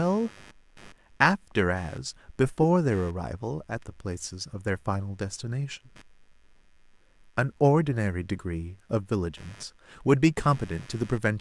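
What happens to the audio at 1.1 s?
At 1.1 s the computer's processor, graphics or mouse activity is disturbing the ground shared with the audio circuit, and this computer activity noise runs through the entire clip rather than starting at that moment. The load changes inject a buzzing, chirping texture pulsing at around 100 times per second, sitting roughly 30 dB below the speech. Because it follows the machine's activity rather than the talker, it persists through pauses as well as words.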